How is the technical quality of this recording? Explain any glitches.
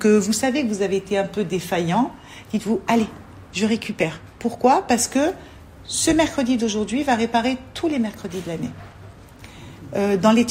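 No glitches turn up here at all, so there's nothing to explain and the recording simply runs without a hitch.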